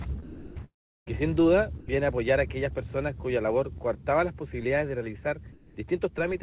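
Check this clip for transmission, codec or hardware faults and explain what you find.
Four kinds of transmission fault are audible, on top of a band that stops at 4 kHz, which fits a G.711 call codec.

Sound dropped by the voice detector, 0.23 to 0.57 s and 1.80 to 1.88 s: the sound gives way to flat noise, likely because the detector judged it background. On a spectrogram these stretches show uniform, featureless texture.

Long network dropout, 0.65 to 1.08 s: a fading buzz continues the last sound, then near silence. The waveform collapses to almost nothing for about a third of a second. This is likely a network dropout.

Short concealed packet loss, 3.78 to 3.89 s: a brief smear where missing audio was patched by extending the previous sound. On a spectrogram it appears as a short, blurred vertical seam.

Comfort noise in place of the background, 5.52 to 5.76 s: the real background is likely replaced by steady synthetic noise about 5 dB quieter. 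The waveform shows a smooth, lower-level band.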